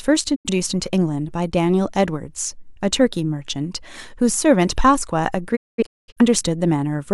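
At 0.34 s the speech mutes for roughly 85 ms with a quick 20 ms fade, a digital broadcast dropout where the receiver lost a couple of frames. Between 5.55 and 6.21 s it happens again, as scattered holes totalling about 470 ms, the longest around 210 ms.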